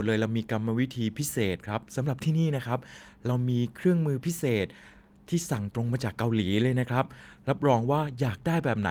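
Listening through the speech recording, nothing stood out as a technical fault at any point.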